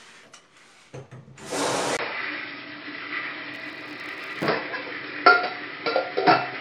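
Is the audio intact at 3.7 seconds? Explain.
No. From 1.97 s to the end, the sound is dull and boxy, with a fresh noise floor well below the signal, and no level change after a 20 ms gap. This is likely an input switched to a poorer device, not a low-pass filter, because of the gap and the new noise.

From 3.54 to 4.50 s there is also a 100 Hz buzz that rises and falls with the signal's level. This is a filter restarted on every block, so each block opens with a small transient. Unlike mains hum, its strength tracks the level of the sound.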